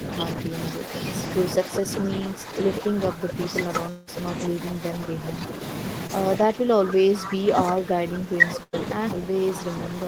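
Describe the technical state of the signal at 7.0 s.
Speech suppressed in double talk runs from 6.42 s to the end at 10.07 s. At 7.0 s the voice is being pulled down, dipping by around 10 dB at its deepest, likely because an echo canceller, facing both sides talking at once, attenuated its own talker along with the echo. An echo leak also covers 6.90 to 7.30 s: a delayed copy of the speech trails by 192 ms at roughly 10 dB below it, likely residual loudspeaker pickup the far end's canceller failed to remove and sent back.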